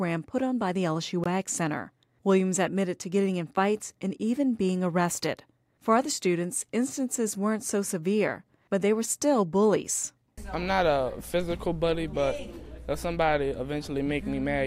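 At 1.24 s the sound drops out for about 19 ms and picks straight back up, likely a Bluetooth stall where the headphones' buffer briefly ran dry.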